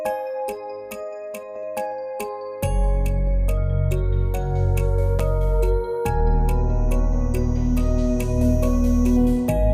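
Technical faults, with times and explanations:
5.19 s, repeated buffer: fresh audio failed to reach the output device in time, so it replayed the block it had just played, giving the same tiny slice of sound twice back to back. The repeat lasts only about 5 ms, which points to a buffer of roughly that size. A slice that short can't be heard as a stutter. Instead, the hard join at each end of the copy produces a single sharp click, and a few milliseconds of the true sound are pushed aside.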